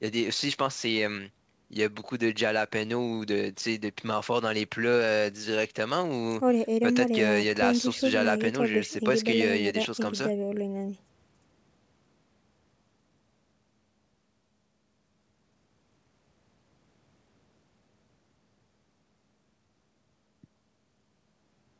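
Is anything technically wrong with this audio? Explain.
No, this speech has the sound of an ordinary call path, with the microphone processing and a G.722 connection at 64 kbps leaving nothing above 8 kHz, and no technical fault can be heard in it.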